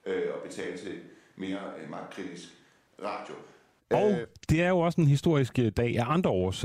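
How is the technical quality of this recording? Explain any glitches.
The recording has one clear problem, in its opening stretch, while the rest of the speech is heard through a close, direct pickup.

From the very start until 3.79 s the speech sounds roomy and hollow, thin in the bass and about 10 dB quieter, with background noise sitting only around 30 dB below it. At 3.79 s it snaps back to a close, full sound. This is likely a switch to a distant microphone, picking up room reflections and ambience instead of the direct voice. A simple low-cut filter would thin the tone without adding room sound, and added reverb wouldn't drop the level and raise the noise all at once.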